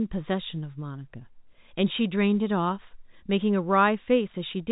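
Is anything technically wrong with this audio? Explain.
No, nothing's wrong here; it's just speech carried over ordinary G.711 telephone coding, so it has that familiar narrow phone-line sound with nothing above 4 kHz.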